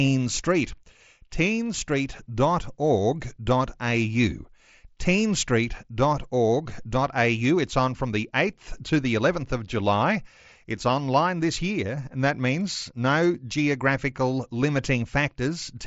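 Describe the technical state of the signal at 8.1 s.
At 8.1 s the speech is intact, with no fault present, only the ordinary wideband character of the mSBC Bluetooth headset path, which leaves nothing above about 7.7 kHz.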